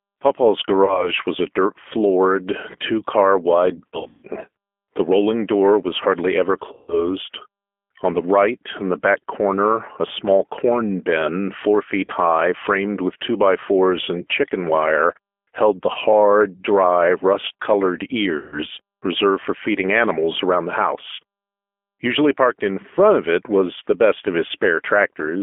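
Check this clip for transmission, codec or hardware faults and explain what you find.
The speech carries a G.729 codec throughout, with six bursts of VoIP packet loss concealed by the speech codec.

G.729 codec: The whole clip is squeezed into a 250 Hz to 3.5 kHz line band and rebuilt from a vocal tract model and a few pulses per frame at 8 kbit/s. The result is plainly rough and synthetic. A simple telephone band limit would only sound muffled, not grainy.

VoIP packet loss concealed by the speech codec: This occurs at 0.85–1.10 s, 3.89–4.25 s, 6.73–7.08 s, 12.05–12.11 s, 15.92–15.97 s and 18.37–18.59 s. The decoder stretches the last pitch and filter into a fading buzz, and speech stays weak briefly afterward. The sound points to losses of about 30 ms at 0.85, 12.05 and 15.92 s, and 150 ms at 6.73 and 18.37 s. Around 3.89 s there is scattered loss of about 270 ms. A plain dropout would leave silence instead of this buzzing tail.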